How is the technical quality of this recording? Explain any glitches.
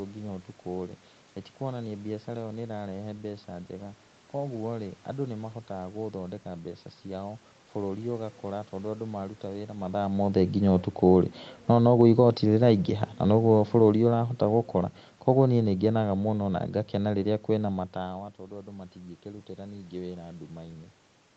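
The main issue is the automatic gain control hunting around the middle of the clip. It dips, recovers, then sinks for several seconds.

Automatic gain falling happens twice. First, from 11.55 to 11.92 s, the gain drops by about 3 dB. Then a longer slide runs from 12.43 to 17.78 s, losing about 7 dB, and ends just before "matawa tondũ andũ matingĩkĩrutĩra". In both cases the control decided the input was too hot, or its background noise too strong, and wound the gain down gradually. The speech and the room noise sink together, which separates it from someone simply turning away.

Automatic gain rising sits between those two dips, from 11.85 to 12.45 s, and brings back about 3 dB. Here the control judged the level too low after its first cut and pushed the gain up again over roughly half a second, so voice and background swell together. That quick down-up-down sequence gives the passage a pumping, unsteady level. 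The separate level shifts near 9.5 and 17.5 s sound like the talker moving relative to the mic rather than the processing. The top end stops around 8 kHz, which fits an Opus call link at roughly 32 kbps.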